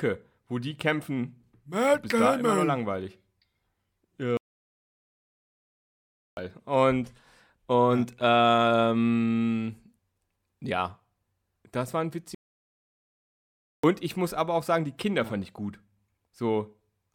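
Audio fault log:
4.37–6.37 s and 12.35–13.84 s, playback stall: the speech cuts out mid-flow and falls completely silent for 2.0 s, then again for 1.49 s, before resuming. The likely cause is the player running short of data or its thread being blocked, so nothing reaches the output until it recovers. On a waveform each gap is a flat line with abrupt edges. A spectrogram shows a vertical band of total blankness across every frequency.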